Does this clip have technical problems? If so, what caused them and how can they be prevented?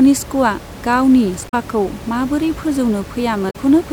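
Yes. Damaged data in a compressed stream causes two brief glitches, at 1.45 to 1.54 s and at 3.47 to 3.56 s, each 90 ms long. Corrupt bytes spoil the frames there. The decoder loses sync and hunts for the next frame header. Checksummed, error-checked transfer and storage prevent this.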